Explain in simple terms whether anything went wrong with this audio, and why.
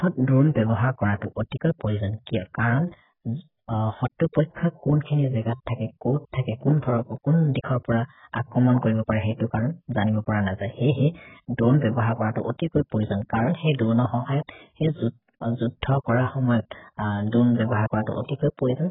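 The speech sounds muffled and smeared from start to finish, with a warbly, fizzy edge on hissing sounds and nothing above about 3.8 kHz. This is likely heavy AAC compression, which throws away detail and treble to squeeze the audio very small.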